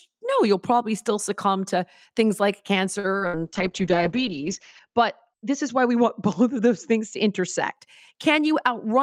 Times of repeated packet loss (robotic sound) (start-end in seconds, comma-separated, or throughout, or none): 2.99-3.42